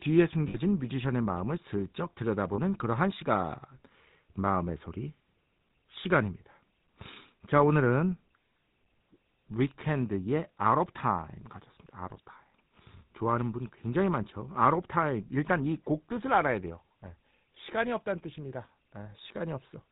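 GSM full-rate codec runs throughout: the voice is rebuilt from a vocal-tract model and sparse pulse excitation, giving a plainly audible buzzy roughness with nothing above 4 kHz, consistent with 13 kbit/s. Lost GSM frames at 0.48 to 0.57 s and 2.54 to 2.59 s repeat the last good frame's settings, holding a rough metallic ring for 60 ms and 40 ms.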